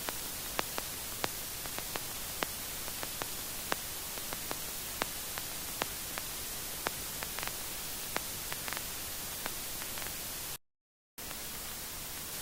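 At 0.71 s a stretch of audio was dropped, about 0.7 s of it, while later packets were already queued, and playback resumed from them with no fill. This skip ahead makes the everyday sound jump forward abruptly, its two sides butted together.

From 0.81 to 2.36 s the jitter buffer was still holding more audio than its target, so it trimmed short pitch-period-sized pieces again and again, around 150 ms in total. This jitter buffer speed-up runs the sound at 110% speed without raising its pitch, so it feels hurried.

From 10.56 to 11.18 s the output went silent for 0.62 s, most likely because the player ran out of data or its thread was blocked. This playback stall cuts the sound off in mid-flow before it picks up again.

From 11.18 to 12.32 s the player resampled its backlog to win back the lost time. This catch-up at higher speed plays the sound at 1.5 times normal speed, with the pitch raised by about seven semitones, until the rate drops back to normal.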